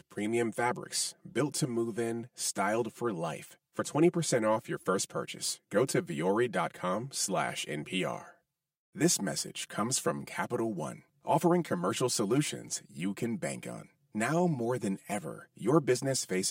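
Throughout, one channel arrives roughly 5 ms late before the mono sum, causing channel delay comb filtering: notches from around 100 Hz upward leave the speech hollow and phasey.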